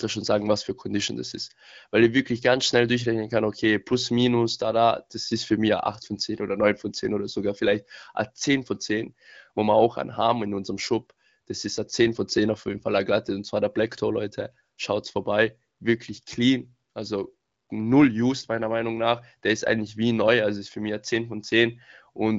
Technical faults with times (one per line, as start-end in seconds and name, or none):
none